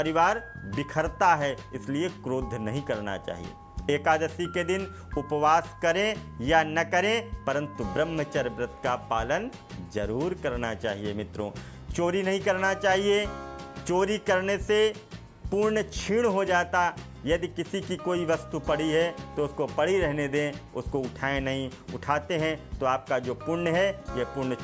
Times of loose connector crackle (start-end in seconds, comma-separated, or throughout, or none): none